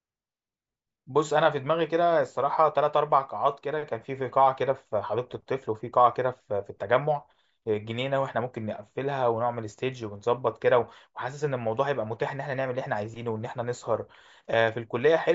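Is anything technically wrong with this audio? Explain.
No, nothing technically wrong can be heard here.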